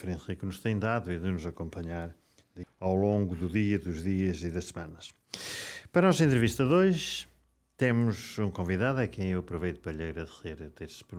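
At 2.63 to 2.65 s there is a skip ahead. Most of a second of audio, about 0.7 s, never plays. Later audio was already queued, so playback jumps straight to it. No silence fills the break. The two sides butt together abruptly.

From 2.73 to 3.70 s a jitter buffer speed-up follows. The buffer held more audio than it aims for, so the receiver trimmed many tiny pitch-period slices to catch up. About 0.15 s is removed. The sound runs at 114 percent speed, hurried but unchanged in pitch.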